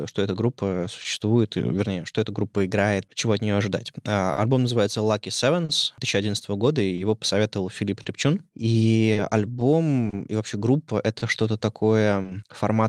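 Throughout the speech, clock drift between sender and receiver is present, with the sender's clock running roughly 3 percent slow. The receiver's buffer keeps draining, so small hiccups recur unevenly.

From 0.32 to 4.11 s, between "что эта" and "альбом называется", repeated timing corrections play the audio at 98 percent speed, stretching it by around a tenth of a second. It sounds subtly dragged. On a spectrogram, formant tracks look slightly elongated.

Five short stalls from late packets occur at 1.02 to 1.07 s, 4.33 to 4.39 s (just before "альбом называется"), 5.65 to 5.71 s, 6.95 to 7.00 s (after "года и"), and 8.02 to 8.07 s. Each holds the last sound for 30 to 40 ms and nothing is lost. They show as flat, smeared horizontal streaks with a slight buzz or dip.

From 9.13 to 12.27 s, scattered short gaps, about four of them and none much longer than 30 ms, are patched by continuation. 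They make brief ticks or smears, and the waveform shows small repeated-cycle patches.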